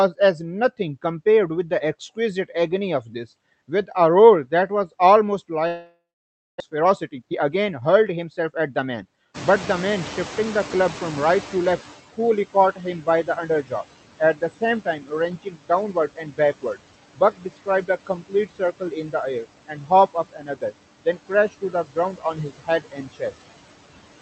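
It's a speech recording with noise suppressor artifacts all the way through: the background is pulled down by about 16 dB, so it dips between words and creeps back underneath them. From 5.67 to 6.62 s the audio breaks up, with a fading buzzy fill of roughly 0.9 s that ends in about 0.55 s of silence, and around 0.6 s of speech just never shows up, most likely a long network dropout. Right after, from 6.70 to 9.03 s, you get a jitter buffer speed-up: the speech runs at about 113% with the pitch unchanged, trimming roughly 0.3 s to claw back the delay. The room noise jumps by about 21 dB near 9.5 s, and from 9.34 to 11.96 s the noise suppressor is catching up, letting the louder noise through before its estimate settles over about 2.6 s and cuts it by about 13 dB. After that there's speech cut by the noise suppressor at 12.53 to 13.84, 14.19 to 15.12, 15.43 to 16.79, 17.14 to 20.72 and 21.05 to 23.32 s, where quiet bits and word endings get swallowed, dropping about 13 to 19 dB at worst. 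Through all of it the call codec's ceiling around 8 kHz is audible as dulled top end.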